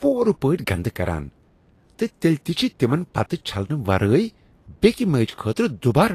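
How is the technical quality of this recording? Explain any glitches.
Technical quality is poor. Likely Vorbis compression damage is plainly audible throughout. Coarsely quantised treble becomes noise. The speech sounds hissy and grainy, which fits about 37 kbps.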